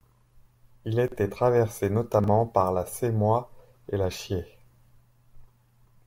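A speech clip with two brief jumbled moments: one from 1.08 to 1.16 s, and another from 2.20 to 2.28 s, just before "par la". These are chunks out of order. In each spot a 40 ms piece of audio played one chunk late, after the piece meant to follow it. Nothing is missing, but the swapped order scrambles that 80 ms stretch and leaves three abrupt joins.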